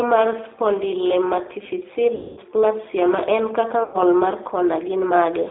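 Throughout, the speech has the rough, slightly synthetic texture of the G.729 codec, with plainly audible damage. The band runs from about 250 Hz to 3.7 kHz, and the grain points to an 8 kbit/s G.729A coder. Each 10 ms frame is rebuilt from a vocal tract filter, a pitch predictor and a few pulses. That pulse-built roughness is what separates it from plain telephone band-limiting, which narrows the sound without making it buzzy or artificial.

From 2.15 to 2.40 s, right after "mar spondylometaphyseal", there is VoIP packet loss concealed by the speech codec. About 220 ms of audio is missing, which points to roughly eleven lost packets. The decoder keeps repeating its last pitch and filter at falling gain, so the sound smears into a buzzy tone or coloured noise that fades. A second loss of about 100 ms follows at 3.84 to 3.97 s, after "ma en kaka", and behaves the same way. Because each decoded frame builds on the one before, the speech stays weak and distorted briefly after each gap ends.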